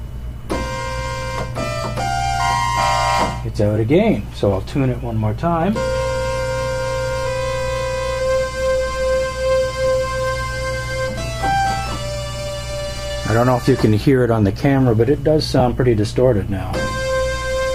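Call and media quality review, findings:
Lost LE Audio frames at 15.60 s: a single 7.5 ms frame dropped over Bluetooth, LC3 decoder concealment reused the previous spectrum with randomised signs, giving a brief noisy smear.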